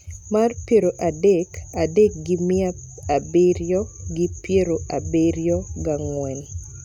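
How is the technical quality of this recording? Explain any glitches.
No glitches or technical faults can be heard anywhere in the recording.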